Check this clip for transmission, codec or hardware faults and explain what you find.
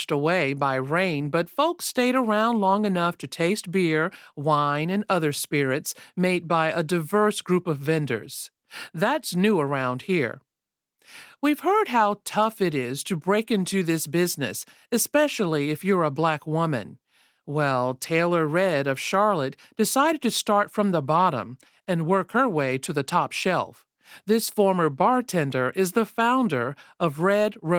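No transmission, codec or hardware faults are audible in this speech clip; the Opus voice coding at about 24 kbps in hybrid fullband mode leaves only light coding traces, as expected for that setting.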